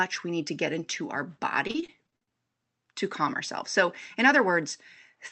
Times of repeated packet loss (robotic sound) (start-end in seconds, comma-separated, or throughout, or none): 1.67-2.32